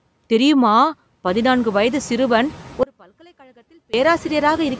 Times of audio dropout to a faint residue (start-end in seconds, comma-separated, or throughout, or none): 2.83-3.94